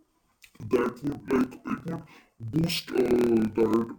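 Throughout the speech, interleaved audio is being read as planar. Each 26.12 ms block's alternating left and right samples get split into halves and stretched. The speech drops an octave, doubled and choppy, with a rough flutter at 38.3 Hz.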